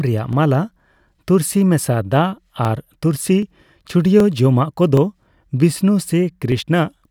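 Speech, with a regular click about every 0.77 s from 0.33 s to 6.52 s, around ten in all. These are likely clock drift buffer slips, each dropping or repeating a few dozen samples from roughly 0.1% clock mismatch.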